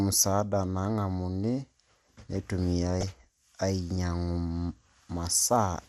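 Throughout, the speech sounds dull and gurgly with granular grit, likely MP2 compression starved of bits, which fits a rate near 80 kbps, switching off upper sub-bands. From 3.01 to 3.12 s comes a brief burst of noise blips in single sub-bands: DAB burbling, where a small rate of uncorrected bit errors corrupted the audio data across several frames.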